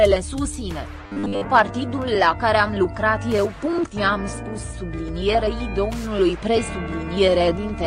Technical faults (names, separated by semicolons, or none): robotic sound from repeated short buffers